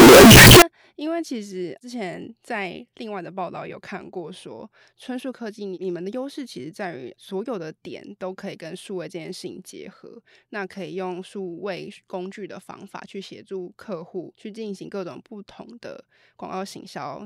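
From 0.00 to 0.62 s, the 16-bit samples were likely read with signed and unsigned mixed up, flipping the top bit so every zero crossing leaps across the full range. The speech there becomes very loud, harsh distortion, with quiet moments as loud as the rest.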